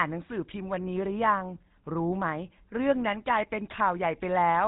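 Throughout, the speech carries GSM full-rate codec damage: pulse-excited vocal-tract modelling leaves a plainly buzzy, gravelly roughness, and a spectrogram shows everything above 4 kHz cut away.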